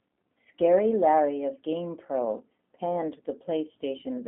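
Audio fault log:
Throughout, G.729 codec: the speech is squeezed into a 200 Hz to 3.4 kHz phone band with nothing above 3.6 kHz, and it sounds plainly rough and synthetic because each 10 ms frame is rebuilt from a filter, a pitch guess and a few pulses, which fits an 8 kbit/s link.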